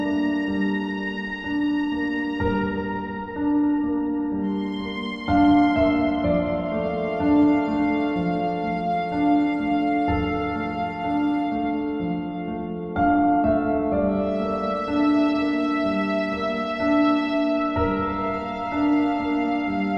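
Nothing in the recording stood out as a fault on listening.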